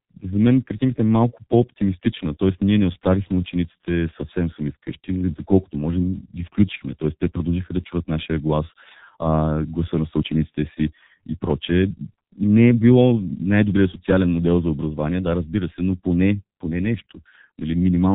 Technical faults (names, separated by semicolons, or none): G.723.1 codec